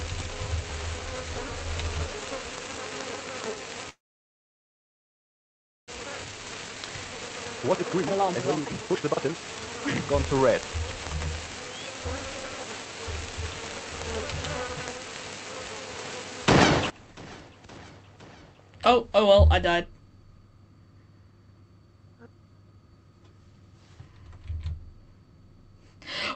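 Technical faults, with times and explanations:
3.89 to 5.90 s, call audio freeze: The sound stops for about two seconds. The last sound is carried on only briefly before nearly two seconds of silence. Then the audio resumes where it stopped. This likely points to delayed packets leaving the jitter buffer empty.
6.03 to 10.59 s, jitter buffer speed-up: The audio runs at about 143 percent speed with no change in pitch, so it sounds hurried. The receiver repeatedly cut out tiny pitch-length pieces, roughly two seconds in total, to shed the delay that built up during the freeze.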